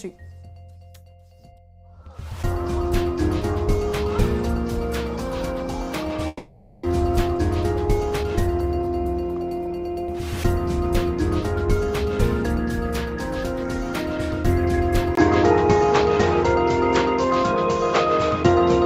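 A long network dropout runs from 6.27 to 6.84 s. The audio likely stopped arriving. The receiver filled the whole gap of about 0.56 s by stretching the last sound into a fading buzz rather than leaving silence. When the audio resumes, it picks up roughly a third of a second further on, so about 300 ms of the original is simply gone. Jitter buffer speed-up then follows at 6.92 to 7.40 s and again at 7.90 to 10.17 s. To drain the excess delay, the receiver repeatedly cuts out tiny pitch-period slices, running the sound at 109% and then 108% speed with no change of pitch. It trims roughly 50 ms in the first stretch and around 200 ms in the second, which makes the passage feel hurried. At 15.15 s the input switched to a poorer device, most likely a different microphone or a headset call profile. A gap of about 20 ms marks the switch. From there to the end, nothing is present above 7.6 kHz, so the sound turns duller and narrower. 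The level also shifts by around 5 dB, and a new background noise floor appears, sitting only some 35 dB below the signal.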